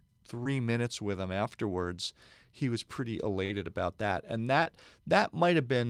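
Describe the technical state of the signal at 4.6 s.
At 4.63 to 4.67 s, short concealed packet loss: about 20 ms never arrived and was synthesised from preceding sound, heard as a brief smear, showing as smoothed, repeated-looking spectrogram texture.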